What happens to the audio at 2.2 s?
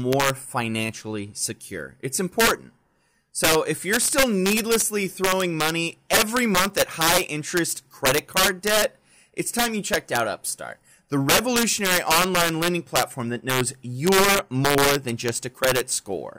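At 2.2 s the speech is hit by integer overflow, present throughout the clip: with the signal driven about 6 dB too hot, the loudest peaks, roughly one percent of samples, wrap to the opposite sign instead of limiting, producing violent cracks far harsher than clipping.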